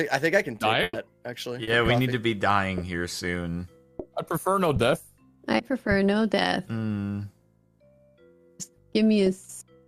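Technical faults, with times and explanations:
0.83 to 0.95 s, burst of packet loss: a run of packets went missing, so the receiver stretched the last bit of sound for about 100 ms and faded it down, with a 10 ms drop to silence. That's the held, dimming smear you hear before the audio picks up again, 100 ms further on.
1.63 to 1.69 s and 5.57 to 5.61 s, short concealed packet loss: two small holes, 40 ms and then 20 ms, were patched by continuing the preceding sound and blending back in. Each one comes across as a quick smear or wobble, and 40 ms and 20 ms of the real audio are gone.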